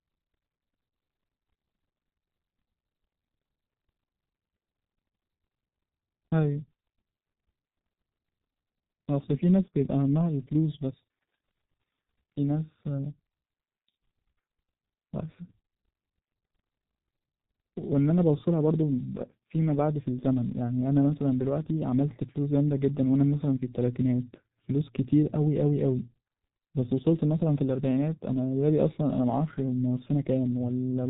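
From start to finish the speech has passed through the G.723.1 codec, an early internet-telephony coder that rebuilds the voice from a coarse model refreshed only once per 30 ms frame. The damage is heavy and fits a rate of roughly 6 kbit/s. Nothing survives above 3.8 kHz, so the speech sounds muffled and boxed-in, with a hoarse, buzzy texture, and consonants are smeared where the slow model cannot follow quick changes.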